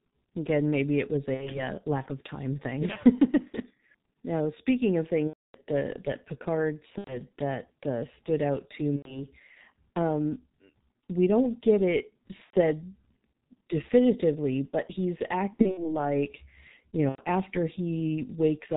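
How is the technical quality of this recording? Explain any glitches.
The technical quality is poor. Heavy low-bitrate codec damage runs through the whole recording, and seven separate concealed packet-loss glitches sit on top of it.

The G.723.1 codec colours all 19 seconds. At about 6.3 kbit/s, the codec encodes speech in 30 ms frames and rebuilds it from a coarse voice model that adapts slowly. Nothing survives above 4 kHz, so the speech is muffled and hoarse, and the consonants smear. A simple low-pass filter would dull the top end but leave the voice clean. This damage adds a rough, buzzy grain to the speech itself.

VoIP packet loss concealed by the speech codec occurs at 1.34–1.63, 5.27–5.57, 6.98–7.22, 8.96–9.26, 12.44–12.55, 15.53–15.96 and 17.09–17.21 s. At each point the decoder stopped receiving audio and stretched its last pitch and filter forward, fading the gain frame by frame. 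The result is a buzzy tone or coloured noise that fades, instead of speech. The 5.27 s event is the longest and fits about nine lost frames, roughly 270 ms. The 15.53 s event is scattered, with short losses of up to 60 ms spread over about a quarter second. Where three or more frames in a row are lost, the codec mutes the concealment from the third frame on. Because each frame builds on the one before, the speech also stays weak or distorted briefly after each gap.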